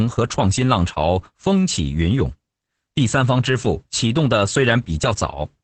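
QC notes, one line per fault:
Throughout, Opus voice compression: the speech sounds muffled and hoarse, with a faintly robotic, buzzy edge and nothing above about 8.8 kHz. The coder is running in its SILK linear-prediction mode at 10 kbps, wideband, in 20 ms frames. At that rate it keeps only the broad resonances of the voice and rebuilds the excitation from a crude approximation. The fine breathy and fricative detail is lost, and the upper band is cut away entirely.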